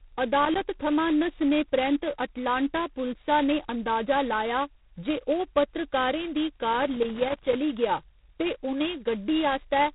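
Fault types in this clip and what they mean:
G.726 ADPCM: the prediction-difference coding is starved of bits, which fits the 16 kbit/s mode, so the speech carries a harsh rasping hiss tracking its level, with nothing above 3.9 kHz.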